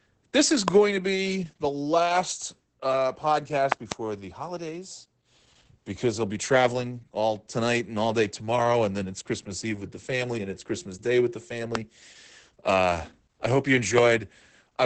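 From start to finish this speech is squeezed through Opus voice compression running in its SILK mode. The top end stops at about 8 kHz, and the coarse coding of the excitation makes the voice muffled, a bit hoarse and faintly robotic. That heavy damage points to a rate of roughly 10 kbps, with SILK's linear-prediction model working with very few bits per 20 ms frame.

On top of that there are four loud pops in three places, each about 20 dB over the speech, while the talking carries on underneath. The first lands between 0.68 and 0.70 s, right after "this is" and before "to be the last". Next, from 3.72 to 3.94 s, comes a pair of pops in quick succession just before "the holidays". The last hits at 11.75 to 11.77 s, just after "with the". These are likely sudden voltage steps from a plug, switch, static or driver glitch, shaped into a sharp snap by the circuitry that follows.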